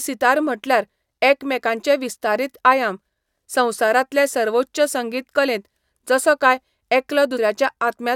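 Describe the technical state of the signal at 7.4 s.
At 7.36 s there is damaged data in the compressed stream, lasting about 17 ms. Corrupted bytes there leave the decoder unable to read the frame cleanly. It loses sync and hunts for the next valid header. The result is a brief blip in the speech.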